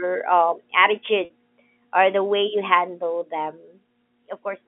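From 1.25 to 1.3 s comes packet loss with pitch repetition: about 50 ms went missing, which fits five 10 ms packets, and the last pitch period was looped to fill it. It sounds like a buzzy hold, not a silent gap or a replayed syllable.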